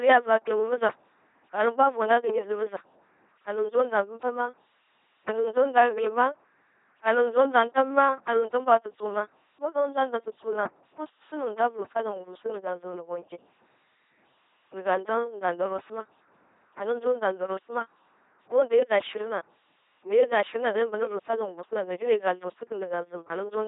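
From start to finish the speech passes through an LPC-10 vocoder, with heavy damage that fits a 2.4 kbit/s rate. Each moment is rebuilt from a simple pulse train or noise through a short vocal tract filter, so the voice comes out buzzing and robotic, with stray buzz or hiss where the voiced/unvoiced choice goes wrong. Nothing remains above 3.8 kHz. A plain low-pass filter would only sound muffled, while this voice sounds synthetic.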